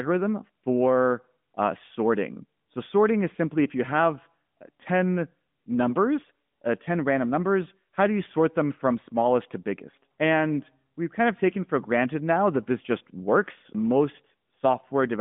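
No technical faults are audible.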